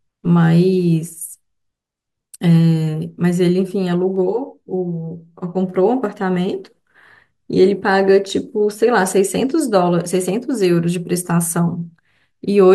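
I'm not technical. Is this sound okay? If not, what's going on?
No, not entirely. From about 4.16 to 5.75 seconds the speech turns hollow and phasey. That's channel delay (comb filtering): one side runs roughly 10 milliseconds late, so when both are mixed together, parts of the sound cancel at regularly spaced pitches.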